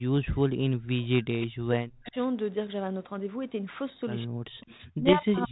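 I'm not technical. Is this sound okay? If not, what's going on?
No. From the start to 1.37 s, again from 1.59 to 2.16 s, and from 4.95 s to the end, the speech sinks sharply, at its worst almost to silence, then comes back. This is likely speech suppressed in double talk: both people spoke at once, and the phone's echo canceller, unable to tell this talker apart from the other side's voice coming out of a loudspeaker, turned everything down.

Faint, ghostly repeats of the speech turn up at 1.40 to 1.47 s, 2.04 to 2.12 s and 4.60 to 4.87 s, each trailing the original by about 167 ms and sitting well below it. This is likely an echo leak. One end of the call was on a loudspeaker, and its echo canceller let part of what its microphone picked up slip back into the call.

Between 5.08 and 5.15 s, a short rough burst of crackle and popping cuts through, with the loudness jumping briefly. These are bit errors on an ADPCM link, the kind of digital connection a cordless phone uses. 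A few corrupted bits threw off the decoder, which rebuilds each moment of sound from the previous one, so the damage rang on for a few milliseconds before it settled.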